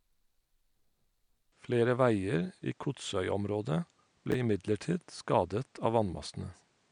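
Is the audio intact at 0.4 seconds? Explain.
Yes, the audio is intact at 0.4 seconds, with no dropout, distortion or other fault at that moment.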